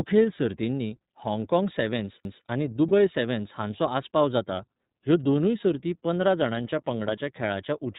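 The whole clip carries iLBC codec damage, and it is plainly audible. Nothing above 4 kHz comes through. The speech sounds a little rough and synthetic. Each frame's excitation is coded on its own, without help from the frame before. The texture fits 30 ms frames at a rate near 13.33 kbps. Sibilants lose their top end. Voiced sounds take on a slightly rough, artificial edge.

At 2.25 s, right after "सर्तींनी हाँगकाँग", there is a CD skip. A knock or a disc flaw threw the laser onto a different turn of the spiral. The player muted for only a few milliseconds, then resumed from another point on the disc. It is heard as a small tick. The speech then jumps abruptly, as if a piece of the flow were displaced.

From 2.88 to 2.92 s, just before "सॅव्हन्स हांचो आस्पाव जाता", come lost iLBC frames. The gap points to a single lost frame of 30 ms. The decoder filled it by repeating the last pitch cycle, mixed with noise. 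It sounds like a brief held vowel with a buzzy, breathy quality. Because iLBC frames stand alone, the speech recovers at once when the next frame arrives.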